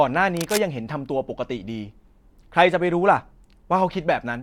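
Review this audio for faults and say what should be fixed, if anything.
Cable scratch noise runs from 0.37 to 0.63 s. It is a quarter-second patch of dense, ragged crackle over the speech. It sits roughly 10 dB below the speech. The likely cause is a worn cable or connector shifting during recording. Its contact resistance jumps about rapidly and adds uneven bursts of noise. To prevent it, replace or reseat worn cables and keep them still while recording.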